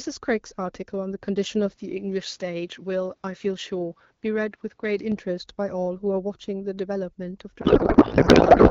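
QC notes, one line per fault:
7.61 to 8.71 s, codec payload misread: for the last second or so the speech collapses into garbled noise and warble that barely tracks what was being said. The AMR-WB frames were packed octet-aligned but unpacked as bandwidth-efficient, so every field sits in the wrong place and the decoder turns valid-looking frames into nonsense. It runs right to the end because the two sides never get back in step.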